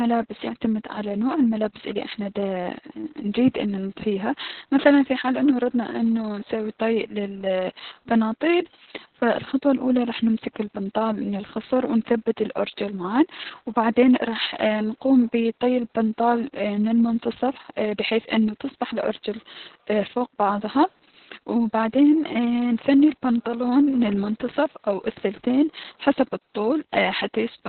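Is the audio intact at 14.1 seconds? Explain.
No. Opus voice compression runs throughout, including 14.1 s: nothing above 4.3 kHz survives, pointing to narrowband SILK near 6 kbps, so speech sounds muffled, hoarse and slightly robotic.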